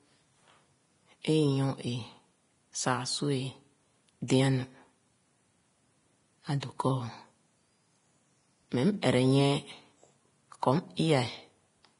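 Vorbis compression, heard across the whole clip, is the likely cause of the grainy, hissy speech. Nothing survives above 10.6 kHz, and the treble is quantised so coarsely that fine detail turns to rough noise, damage heavy enough to point to roughly 30 kbps.

Pre-echo appears at 4.28 s, smeared over 18 ms, and again at 9.02 s, over 14 ms. Quantisation noise sized for a sharp onset spreads back into the quiet just before it, so each attack arrives with a brief hiss and a softened edge.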